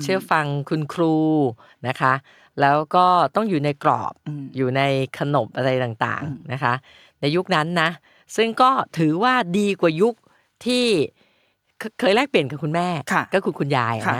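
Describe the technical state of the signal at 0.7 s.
At 0.7 s the audio is intact, with no technical fault present at that moment.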